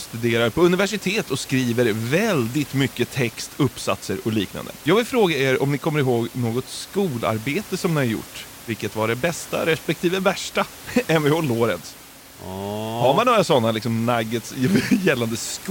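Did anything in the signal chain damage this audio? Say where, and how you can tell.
No, nothing in the chain has done this speech any harm, and the room noise sitting about 19 dB below the voice is just the space the microphone was in.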